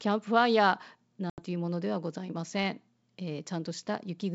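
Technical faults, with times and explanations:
1.30–1.42 s, packet loss on an ADPCM call: about 80 ms of the G.722 speech, a few packets' worth, becomes a hard-edged silent gap. The decoder's adaptive predictor and step size lose sync with the sender's, so speech returns slightly distorted before settling.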